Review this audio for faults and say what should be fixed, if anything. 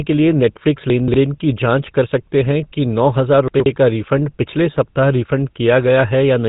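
The whole clip has that buzzy, gravelly GSM full-rate codec sound with nothing above 3.8 kHz, which fits a 13 kbps GSM path that coarsely models the voice and its excitation. Keeping the audio on a wideband codec, or recording before it hits the phone network, would avoid it.

There are chunks out of order at 0.9 to 1.14 s and again at 3.48 to 3.66 s. A 60 ms slice seems to land about three chunks late the first time and two the second, so you hear jumbled moments at the hard joins. A jitter buffer that reorders by sequence number or timestamp before playout or writing would fix it.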